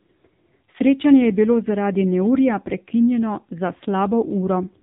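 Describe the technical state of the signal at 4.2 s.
At 4.2 s you're hearing the AMR narrowband mobile codec that runs through the whole clip: nothing above 3.8 kHz, and a low-bit vocal-tract model leaves the speech buzzy and synthetic, heavy damage that fits a rate around 6.7 kbps.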